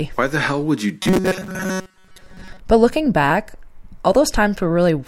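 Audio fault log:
1.02–2.60 s robotic sound from repeated short buffers: the speech turns into a rigid, metallic buzz at 188 Hz that loosely follows the words. Audio likely arrived too seldom, so a chunk of about 5.3 ms was replayed in place of most of the real audio.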